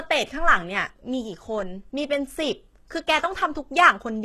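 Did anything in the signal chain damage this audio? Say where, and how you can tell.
Yes. Across the whole speech clip the upper range sounds synthetic: s sounds come out gritty and metallic, the treble doesn't blend with the lower voice, and nothing reaches above about 12.3 kHz. The likely cause is the codec stage, HE-AAC compression at a very low bitrate, with the sound pointing to around 16 kbps. The lower band is coded directly, and the treble is rebuilt by copying lower bands upward under a coarse envelope, so its harmonics don't line up.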